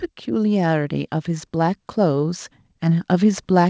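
A speech recording in which the level climbs steadily from 0.25 s to 3.48 s, a case of automatic gain rising. The gain control judged the input too quiet and kept turning it up, by about 10 dB in total, so the voice and the background noise swell together. On a waveform the envelope widens gradually across that span. On a spectrogram the whole picture brightens evenly, noise floor included, below a band-limit near 8 kHz that fits a G.722 call codec.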